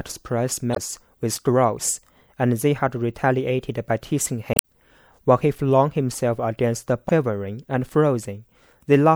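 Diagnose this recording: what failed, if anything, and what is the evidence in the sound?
The codec stage failed: damaged data in the compressed stream. Short glitches break the speech at 0.72–0.78 s, 4.52–4.64 s and 7.07–7.09 s, where the decoder hits corrupted frames, loses sync and hunts for the next valid frame header.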